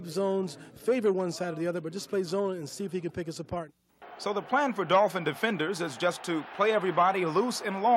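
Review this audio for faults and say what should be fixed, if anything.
Nothing in the audio needs fixing. No faults can be heard anywhere in it, so there is nothing to correct or prevent.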